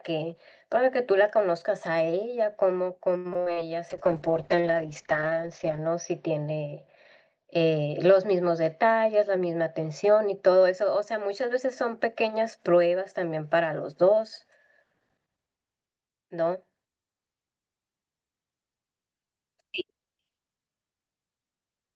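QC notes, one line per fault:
3.17–3.58 s, repeated packet loss (robotic sound): Audio packets on the call path went missing four times within this short stretch. The receiver covered each hole by stretching the last good sound, about 168 ms of patched audio in all, and left roughly 100 ms simply absent. The longest gap is 72 ms. Because about 41% of the stretch is concealed rather than real, the sound turns choppy, with pieces dropping out.
3.92–12.03 s, call bitrate drop: The call's bandwidth estimate collapsed, and the Opus encoder was pushed to a far lower bitrate, which fits a fall from around 40 kbps to about 8 kbps. It held near its lowest for about 1.9 s. Coding became coarse and the audio band narrowed from a 12 kHz cut-off to 8 kHz, so the sound goes rough, watery and dull, losing its top end until the rate recovers.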